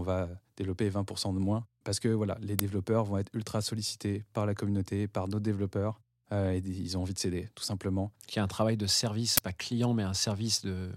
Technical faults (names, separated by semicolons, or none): uninitialised buffer